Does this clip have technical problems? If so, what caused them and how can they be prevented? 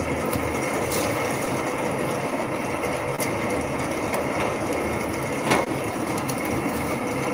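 Yes. Throughout the clip there is clock drift between sender and receiver. The sending device's clock runs slow, by roughly one percent, so audio reaches the receiver a little slower than it is played out. The jitter buffer keeps draining and the receiver has to patch the gaps, which shows up as small timing hiccups at uneven intervals across the whole recording. Prevention: run adaptive resampling at the receiver so it tracks the sender's clock rate and keeps the buffer level steady.

There are also two short stalls from a late packet, at 3.16 to 3.21 s and at 5.64 to 5.69 s. In each case a packet was missing when it was due, the jitter buffer ran empty, and the receiver held the last sound for about 27 ms and then about 21 ms until the data arrived. Playback then continued from the same point, so nothing is lost, but the sound briefly hangs with a slight buzz or dip. Prevention: keep the jitter buffer deep enough to absorb delay spikes of this size on the network path.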